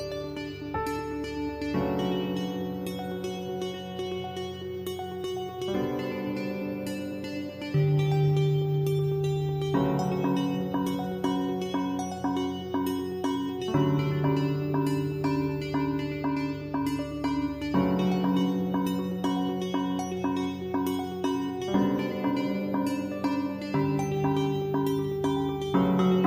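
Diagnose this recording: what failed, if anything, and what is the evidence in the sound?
Nothing failed: the recording shows no evidence of a fault at any stage.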